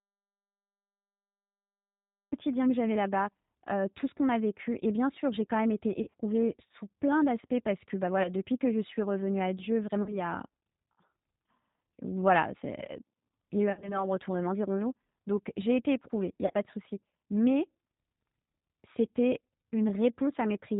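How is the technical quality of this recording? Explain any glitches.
The quality is poor: the whole recording carries plainly audible low-bitrate codec damage, it opens in silence, and it has five short concealed packet-loss glitches.

Throughout, the G.729 codec is plainly audible. Speech is rebuilt from a vocal-tract filter, a pitch predictor and a few pulses per frame, so it sounds rough and slightly synthetic, which fits an 8 kbit/s codec. On a spectrogram, nothing appears above 4 kHz.

From the start until 2.32 s, the clip is an audio dropout to silence, with the sound arriving just before "que j'avais". The likely cause is lost input while writing continued. The waveform is a flat line, and the spectrogram is blank, with no room tone.

VoIP packet loss concealed by the speech codec occurs at 6.02–6.15 s (between "j'ai quand même été" and "sous plein d'aspects parce"), 8.23–8.31 s, 10.03–10.2 s, 13.7–14.05 s and 16.46–16.54 s (between "été éprouvée il n'y" and "pas de souci"). 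The decoder extrapolates the last pitch and filter, producing a fading buzz. The waveform shows smeared, decaying periodicity, and the spectrogram shows flat, repeated harmonics.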